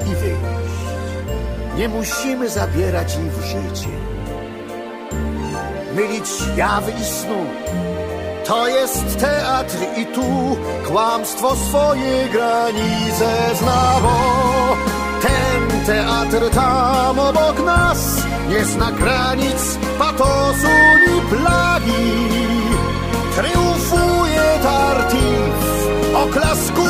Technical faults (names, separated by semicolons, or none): loudspeaker feedback squeal